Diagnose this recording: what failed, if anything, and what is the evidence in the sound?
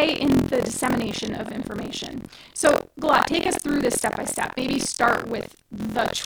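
Buffer tearing at the driver or buffer stage produces a robotic 43.1 Hz rattle throughout the speech, which fits a 1024-sample buffer. The write and read pointers cross each period, so about a fifth of every buffer replays audio around 70 ms old. This leaves hard steps in the waveform and vertical striations on the spectrogram repeating at 43.1 Hz.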